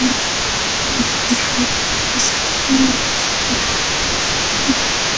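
From the very start to the end at about 5.2 s, an echo leak runs under the speech: a delayed copy trails each phrase by about 263 ms, roughly 10 dB quieter, most likely because a loudspeaker's pickup slipped past the far end's echo canceller and was returned. On a spectrogram, each burst of harmonics and formants reappears as a fainter duplicate shifted about a quarter second to the right. The waveform shows smaller ghost envelopes trailing each syllable.

Between 0.11 and 3.88 s, the speech suppressed in double talk appears as the main voice dipping in pieces, about two seconds in total, by around 10 dB at its deepest. With both sides active, the canceller likely mistook the talker for echo and attenuated everything. The waveform envelope sags in uneven chunks, and the spectrogram thins, especially in the upper bands up to the 8 kHz ceiling of the call path. From 4.26 s to the end, a milder repeat dims roughly half a second by about 5 dB.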